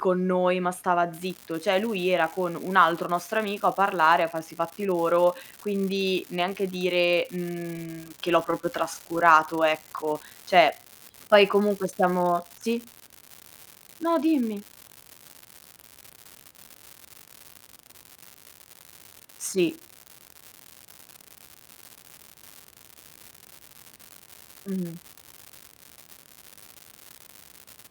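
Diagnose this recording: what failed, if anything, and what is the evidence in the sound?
An unreliable data bit runs from 1.13 s to the end of the recording, which points to the converter's digital interface. One marginal data line flips its bit at random, adding same-sized spikes heard as a constant crackle that persists through pauses.

Scattered short gaps occur between 8.15 s and 9.21 s, a network fault. About seven lost or late packets, none longer than roughly 15 ms, were concealed by extending the preceding sound. The patching covers around 70 ms and is heard as brief ticks and smears.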